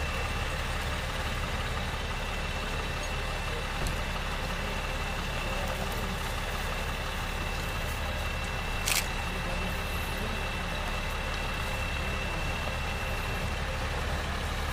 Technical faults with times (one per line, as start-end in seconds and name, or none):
none